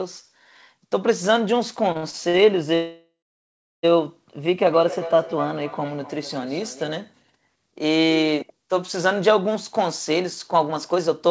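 From 1.92 to 2.41 s the speech shows repeated stalls (stutter). Packets arrived late or more slowly than playback consumed them, so the jitter buffer emptied five times in half a second. Each time the receiver stretched the last sound to cover the wait, 171 ms in all and at most 57 ms at once, about a third of that stretch. Nothing is lost, but the speech drags and catches in short hitches.

From 2.75 to 3.85 s comes a call audio freeze. The sound hangs as a continued buzz or hiss that fades out, and about 720 ms of it is silence before the speech resumes exactly where it stopped. The likely cause is packets held up in transit long enough to drain the jitter buffer, with the receiver filling 1.08 s rather than dropping anything. The result is an inserted pause that pushes everything after it about a second later.

Between 4.36 and 7.00 s there is feedback echo between two devices. A second device in the same room on this call plays the audio back, and its microphone feeds it round the loop again. 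Neither echo canceller removes sound played by the other device. Each phrase returns roughly a third of a second later, thinner and more ringing, with the loudest repeat about 13 dB below the direct speech.

From 9.55 to 11.29 s a jitter buffer speed-up is audible. The buffer held more audio than its target, so the receiver trimmed short pitch-period-length pieces again and again, about a fifth of a second in total, to bring the delay back down. The speech runs at about 112% of normal pace with unchanged pitch and sounds hurried. Throughout, the G.722 call path leaves nothing above 8 kHz, which gives the audio a dulled top end.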